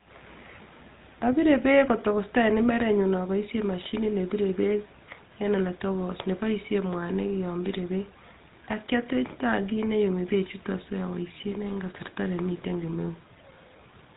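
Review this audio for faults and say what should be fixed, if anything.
GSM full-rate codec damage runs through the whole clip. The speech has been squeezed through a vocal-tract model excited by sparse regular pulses, giving a plainly audible buzzy, gravelly roughness, and nothing passes above 3.8 kHz, a sound that fits the 13 kbps GSM full-rate path. To prevent it, capture or transfer the speech over a wideband or lossless route instead of a GSM full-rate link.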